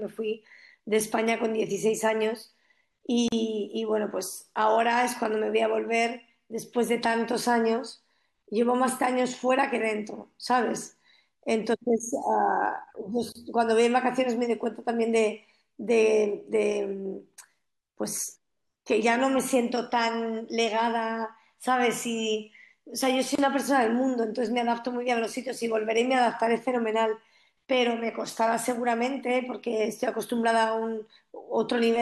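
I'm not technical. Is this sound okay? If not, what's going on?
No. The speech was encoded in separate pieces and joined without trimming, causing a gap at a join of encoded pieces: short dropouts of 39 ms at 3.28 s and 31 ms at 13.32 and 23.35 s.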